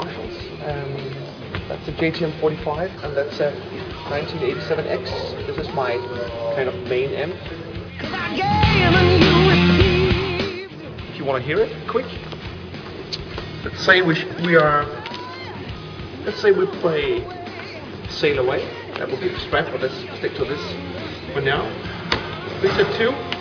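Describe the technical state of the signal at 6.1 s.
At 6.1 s the signal is intact, with no dropout, distortion, glitch or other fault to be heard.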